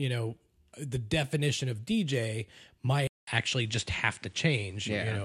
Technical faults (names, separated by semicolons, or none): DAB burbling; input switched to a poorer device